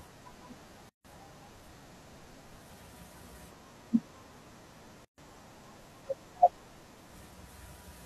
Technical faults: gap at a join of encoded pieces

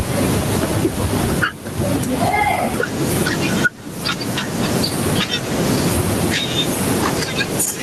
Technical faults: gain pumping

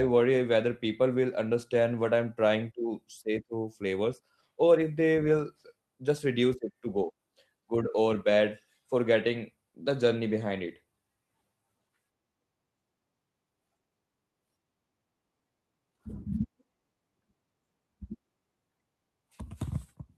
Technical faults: none

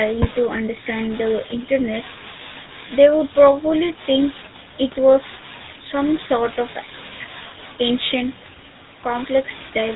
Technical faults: GSM full-rate codec

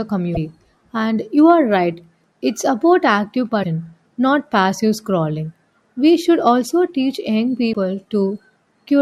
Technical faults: damaged data in a compressed stream

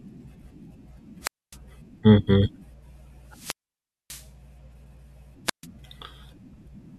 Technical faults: wireless microphone squelch dropout

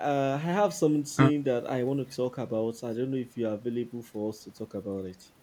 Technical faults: none

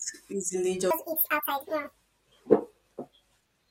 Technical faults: section at the wrong speed

